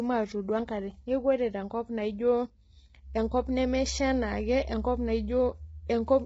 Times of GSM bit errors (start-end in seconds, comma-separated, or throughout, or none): none